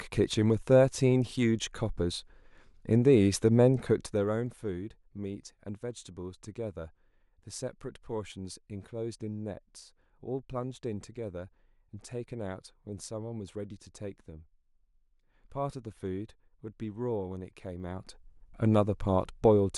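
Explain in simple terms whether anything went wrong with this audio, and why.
A fast ticking or zipping rides on the speech from 3.8 to 4.64 s, as the level drops, and from 17.8 to 18.28 s, as it rises. This is zipper noise: the volume moves in small abrupt steps, about thirty a second, instead of gliding, and each step clicks.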